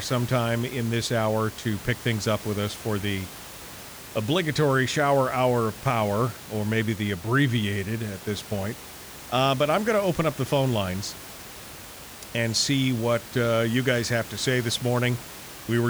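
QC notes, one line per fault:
No technical faults are audible in the signal, and the room's own background noise sits about 17 dB below the speech as part of the recording itself.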